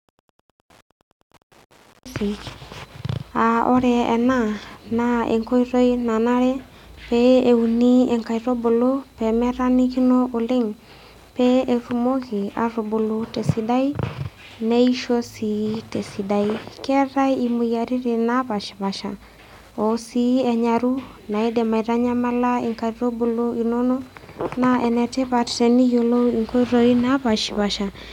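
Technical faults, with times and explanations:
throughout, Wi-Fi interference: faint steady ticking well below the speech, as a nearby radio's beacon every 102.4 ms is rectified by the audio circuit.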